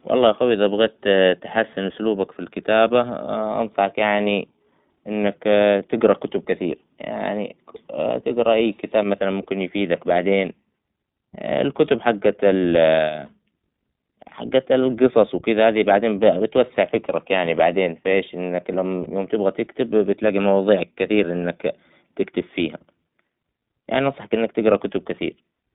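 Throughout the speech, the iLBC codec limits the audio to a narrowband line running from about 150 Hz to 3.7 kHz, so everything above that is missing. The codec codes the excitation of each 20 ms frame independently, and the damage is plainly audible as a rough, slightly synthetic texture on the voice. The framing and quality fit iLBC's 15.2 kbps mode.

Lost iLBC frames occur three times, at 13.26 to 13.29 s, 16.38 to 16.41 s and 19.04 to 19.08 s, each a single 20 ms frame. At each point the decoder fills the gap by repeating the last pitch cycle blended with noise, which sounds like a brief held, faintly buzzy vowel. Because each iLBC frame decodes without reference to the previous one, the voice recovers almost immediately afterward.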